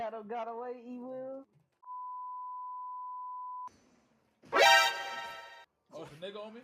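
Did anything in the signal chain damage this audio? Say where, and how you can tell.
No, nothing in the signal chain audibly damaged this audio. I can't point to any stage, from capture to playback, that has left a mark on the sound.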